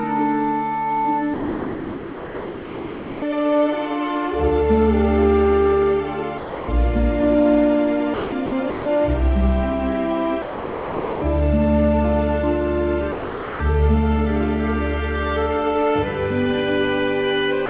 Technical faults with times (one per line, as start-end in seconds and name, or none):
1.34-3.22 sound dropped by the voice detector
6.38-6.68 sound dropped by the voice detector
8.14-8.86 sound dropped by the voice detector
10.42-11.22 sound dropped by the voice detector
13.12-13.60 sound dropped by the voice detector
17.66-17.69 sound dropped by the voice detector